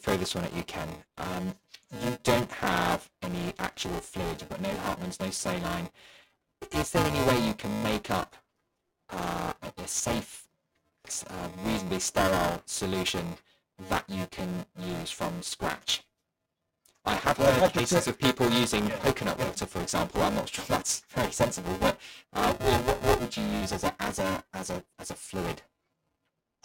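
Speech with buffer tearing throughout: a steady robotic buzz at 375 Hz rides on the voice, where roughly a third of each buffer replays audio a few milliseconds old, which fits a 128-sample buffer.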